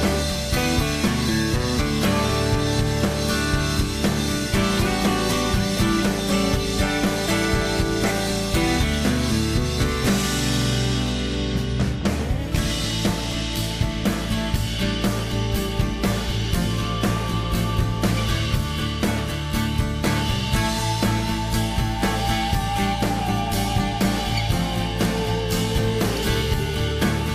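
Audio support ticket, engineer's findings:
No faults found on playback; no dropouts, clipping, distortion or timing problems heard in the audio, nothing to escalate.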